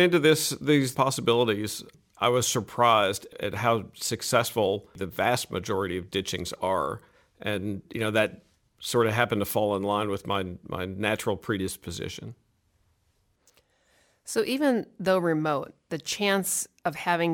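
Sample clock jitter runs through the whole clip: an unsteady converter clock, wandering by around two microseconds, puts each sample slightly off time. This adds a roughness roughly 30 dB under the sound that swells on loud, bright passages, showing as broadband haze above strong high-frequency content that disappears in silence.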